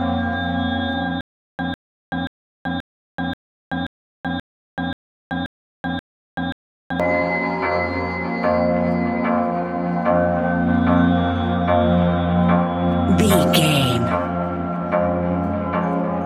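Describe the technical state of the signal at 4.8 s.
At 4.8 s the signal is caught in a stutter with silent gaps: the same 151 ms burst repeats every 531 ms, separated by about 381 ms of dead digital silence, eleven times between 1.21 and 7.0 s. A stalled player or stream likely caused it, replaying its last fragment at each retry while the intended audio is lost.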